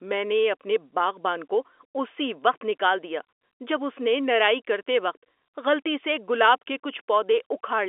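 No technical faults can be heard in the speech, which carries the ordinary narrow band of G.711 telephone coding, running from about 300 Hz to 3.5 kHz as a normal phone line would.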